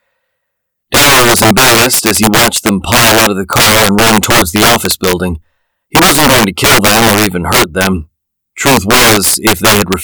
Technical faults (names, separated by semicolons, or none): integer overflow